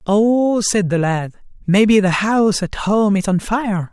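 Nothing stood out as a technical fault on listening to the recording.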